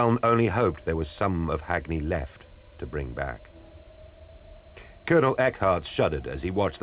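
Nothing goes wrong anywhere in this audio; it came over an ordinary call path using G.711 A-law at 64 kbps, so the sound simply tops out at 4 kHz, which is just how that codec carries it.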